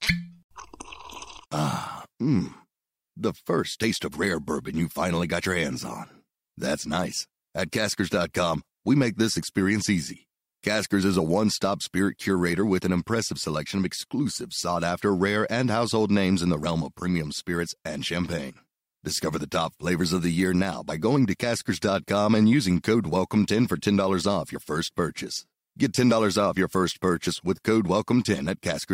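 No technical faults are audible.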